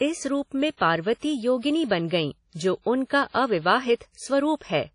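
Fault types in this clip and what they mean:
WMA compression: ringing, washy speech with hiss that swells and fades with the signal, nothing above about 10.1 kHz; likely a low-bitrate transform codec, around 32 kbps.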